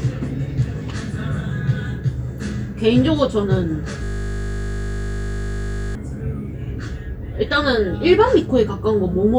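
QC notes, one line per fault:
4.04–5.95 s: system hang loop. The audio stops progressing and a single 20 ms slice repeats 96 times back to back, as if the host or driver froze while the output hardware kept replaying the same ring-buffer segment. Because the repeated piece is so short, the repetitions fuse into a steady 50 Hz buzz rather than a distinct stutter. The buzz ends abruptly at 5.95 s, where normal playback resumes.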